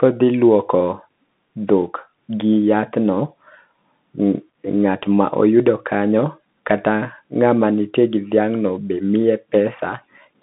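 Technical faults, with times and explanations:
Throughout, Bluetooth CVSD headset codec: the speech is squeezed into roughly 150 Hz to 3.7 kHz, with nothing above 3.8 kHz. One-bit up/down tracking leaves scratchy s sounds and a grainy hiss.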